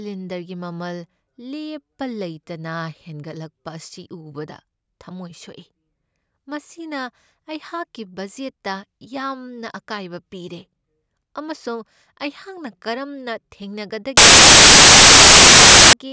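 From 14.17 s to 15.93 s the speech gives way to file tags played as audio: the bytes of an embedded cover picture, already compressed, are decoded as if they were samples. Because compressed data is close to random, it plays back as very loud white noise, a sudden harsh burst of static with hard edges. The waveform shows a solid, dense block of high level, and the spectrogram shows an even wash across all frequencies, cut sharply at both ends.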